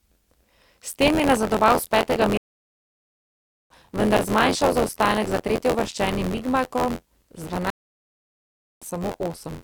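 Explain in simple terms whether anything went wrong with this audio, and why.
Two things went wrong. First, buffer tearing runs through the whole clip. A steady robotic buzz at about 86 Hz sits under the speech. The program filling the playback buffer and the hardware reading it have drifted out of step. In every cycle, a small slice holds sound from a moment earlier, with hard joins at each edge. The buzz rate fits a 512-sample buffer.

Second, there are two stream reconnects. After "nazadoval s petega", the sound drops out at 2.37 s for about 1.3 s. It comes back at 3.71 s, roughly a second and a half further on. At 7.70 s it drops again for about 1.1 s and returns at 8.86 s, roughly 0.7 s later. Each time the connection broke, the player restarted mid-stream, and the speech in between was lost.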